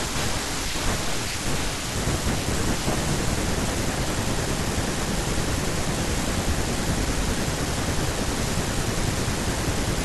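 Nothing stood out on listening to the speech in this recording.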